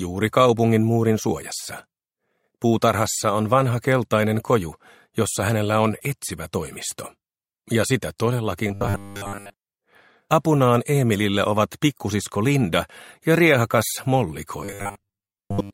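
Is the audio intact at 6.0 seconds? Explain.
Yes, the audio is intact at 6.0 seconds, with no dropout, glitch or distortion at that point.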